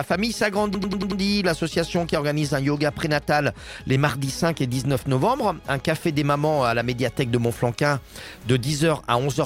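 A system hang loop stalls the audio path from 0.74 to 1.21 s while the hardware keeps replaying its ring buffer. A 92.9 ms slice, which fits a 4096-sample buffer, repeats five times at 10.8 Hz, a machine-gun stutter, before the sound resumes with essentially nothing lost.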